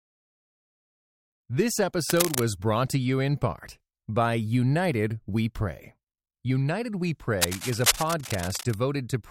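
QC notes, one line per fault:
2.10–2.46 s and 7.41–8.74 s, cable scratch noise: dense, irregular scratching sits only a few dB under the speech, likely from a worn cable or connector being moved as its contact resistance jumps. On a spectrogram these show as ragged broadband smears, and on the waveform as jagged, uneven bursts.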